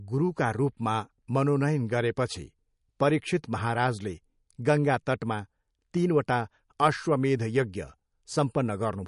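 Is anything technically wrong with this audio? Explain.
Yes. Throughout the speech there's a hard treble wall near 10.6 kHz, plus plainly audible watery swirl and smeared attacks, likely MP3 compression at a starved bitrate around 46 kbps dropping weak frequency lines frame to frame.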